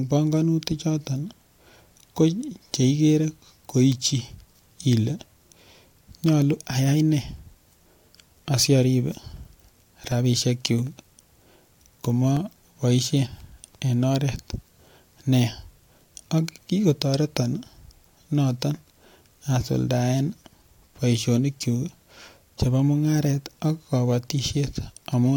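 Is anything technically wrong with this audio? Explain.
Yes. From 9.12 to 12.62 s the recording shows periodic USB or driver dropouts. Something on the system is stalling the USB bus or audio driver every 0.25 s, and each stall drops about a millisecond of speech, with silence left in the gap. Around fifteen of these hit the speech in that stretch, heard as a steady ticking or clicking at four per second that stops when the speech pauses.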